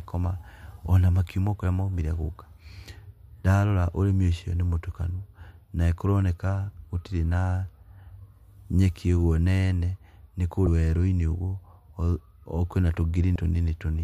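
A brief smeared blip at 10.66 s, with the speech jumping ahead by about 150 ms, and again at 13.35 s, where roughly 100 ms goes missing. These are compressed frames skipped: whole frames of the encoded stream were absent or rejected as damaged, so the decoder leapt past them, around five frames the first time and four the second, each 26.1 ms long. Overlapping neighbour frames smear the join instead of clicking.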